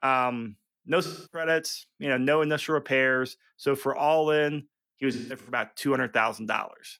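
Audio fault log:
1.02–1.48 s, AAC frame loss with concealment: roughly 300 ms, fitting about seven lost frames, is refilled from the last good spectrum before "you know no initial", sounding smeared and noisy; a spectrogram shows blurred, streaky bands.
5.12–5.58 s, AAC frame loss with concealment: after "for all in he", gaps totalling 256 ms scatter across 341 ms, longest around 150 ms; the decoder's spectral fill shows as patchy, smeared stripes on a spectrogram.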